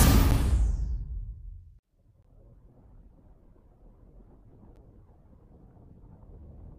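At 0.31 s, 2.23 s and 4.76 s the output stream was handed runs of zeros instead of audio, a block of digital silence each time, which points to a buffer that was not filled in time. The holes last about 10 ms, 20 ms and 10 ms, which fits a buffer period of roughly 10 ms, with one gap spanning two periods. Since the signal drops to zero and returns with no fade, the shorter gaps come across as sharp ticks and the one at 2.23 s as a slightly longer pop.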